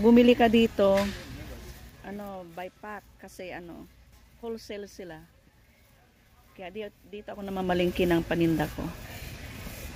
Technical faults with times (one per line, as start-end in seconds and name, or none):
7.25-7.77 zipper noise